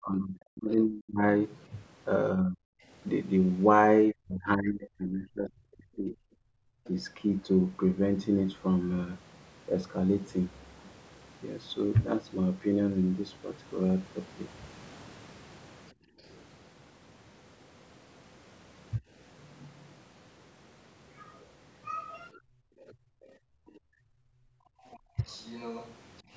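From 0.0 to 6.15 s the speech is repeatedly pulled down, by roughly 35 dB at its deepest and for about three seconds in total. This is speech suppressed in double talk, likely an echo canceller that could not tell the local talker from loudspeaker echo while both sides spoke, so it attenuated everything. From 6.43 to 6.84 s the room background is gated by the echo canceller, dropping by about 27 dB for around 0.4 s while the canceller clamps the microphone. A brief scrap of the other side's voice leaking through follows at 6.84 s, roughly 30 dB below the speech. At 15.93 to 16.21 s the background gates again, down about 23 dB. From 22.34 to 25.93 s the far-end voice leaks through, only about 15 dB under the speech, likely residual echo the canceller failed to remove. Inside that stretch, 22.44 to 25.18 s, the local speech suffers double-talk suppression of roughly 35 dB over about 0.3 s, and from 23.25 to 25.16 s the background is gated by around 23 dB for about 0.7 s in total. 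The call microphone processing band-limits the audio to 8 kHz, which is expected.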